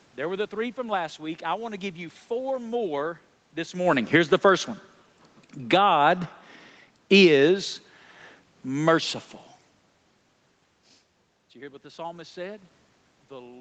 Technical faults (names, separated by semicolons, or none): automatic gain falling